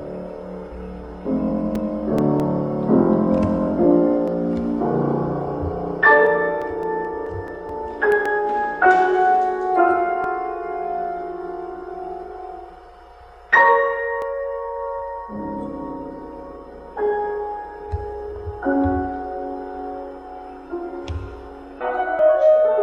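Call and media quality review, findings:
CD scratch ticks, 0.89–2.61 s (nine ticks) and 6.62–8.12 s (eight ticks). Each tick lasts a few milliseconds, about five per second. Source: disc playback. A blemish exceeds error correction once per revolution, and the player conceals the lost samples. Unlike segment overlap, the ticks come in dense runs at rotation rate rather than singly on a fixed grid.

Overlap between stream segments at 4.28–4.32, 6.27–6.31, 8.26–8.29, 10.24–10.27, 14.22–14.25 and 22.19–22.23 s. Each is a single click or skip losing 30–40 ms, with the waveform jumping. The spacing falls on multiples of 2 s, which fits 2-second segments. Source: streaming player trimming timestamp overlap. Unlike scratch ticks, these are isolated events on segment boundaries, and each removes audio rather than patching it.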